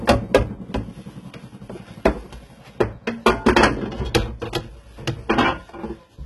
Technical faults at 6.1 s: HE-AAC compression

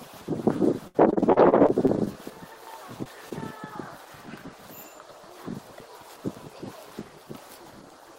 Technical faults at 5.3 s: none

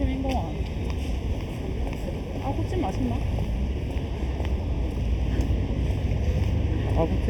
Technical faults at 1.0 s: channel delay (comb filtering)

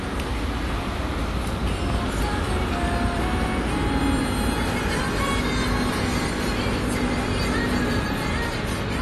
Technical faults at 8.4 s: AAC compression

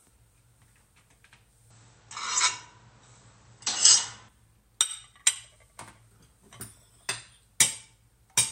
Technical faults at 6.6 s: none

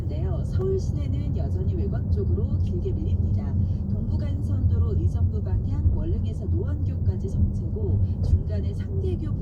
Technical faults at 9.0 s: none

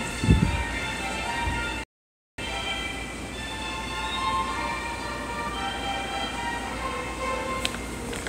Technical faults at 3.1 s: none

